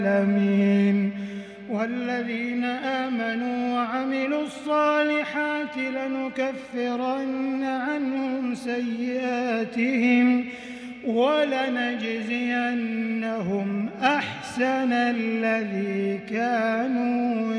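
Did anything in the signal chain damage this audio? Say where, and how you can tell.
No, nothing along the chain seems to have done any harm here, so there's no stage to point to and nothing in the sound to fix.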